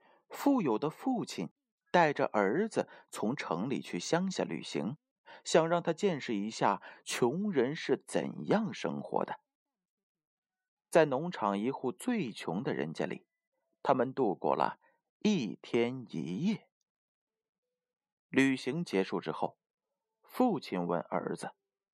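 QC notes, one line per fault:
No faults found on listening; speech level and continuity hold steady across the clip.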